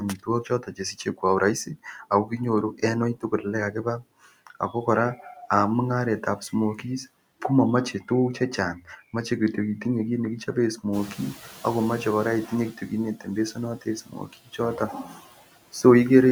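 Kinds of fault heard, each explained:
noise suppressor artifacts: background noise sinks and swells with the speech, because bands judged as steady noise are cut by about 17 dB.
speech cut by the noise suppressor: soft sounds and word endings fade or vanish, dipping up to about 18 dB, because the suppressor mistook parts of the speech for noise.
noise suppressor catching up: after the room noise jumps by about 14 dB near 11 s, it passes through reduced by only about 10 dB, then settles over about 1.9 s as the estimate adapts.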